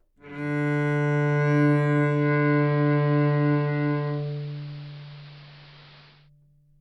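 A short recording of everyday sound with a digital radio blending to analogue: at 2.03 s it cross-fades over about 0.29 s to the AM signal, dropping about 1 dB and picking up hiss roughly 25 dB below the signal, before returning to digital at 6.30 s.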